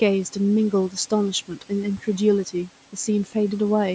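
From 1.48 to 1.71 s, speech gets cut by the noise suppressor, which mistakes it for background and ducks it about 10 dB, so it sounds swallowed.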